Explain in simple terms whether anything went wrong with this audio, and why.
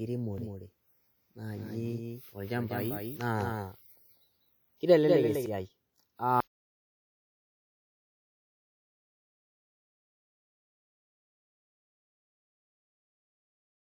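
Two things went wrong here. First, from 0.38 s to 5.46 s there's a doubled audio track: the same speech plays twice, with a second copy trailing roughly a fifth of a second behind and sitting somewhat quieter than the original. It's not an echo from a room, since the copy has no fade or reverb and it starts and stops abruptly. The likely cause is the sound being picked up a second time through a slower path, or an edit leaving two out-of-step copies stacked together.

Second, at 6.40 s there's an audio dropout to silence that runs all the way to the end. The speech cuts off mid-flow and doesn't come back, and the gap is completely dead, with none of the usual background hiss or room sound. That points to the input being lost while the recording kept going, likely from a disconnected device, a failed link or an accidental mute. Whatever was said after that point isn't in the file.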